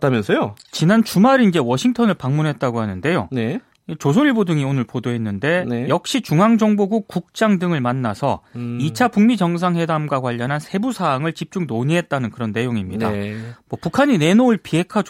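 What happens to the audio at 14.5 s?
Nothing goes wrong at 14.5 s; the audio is intact there, with no dropout, click or distortion.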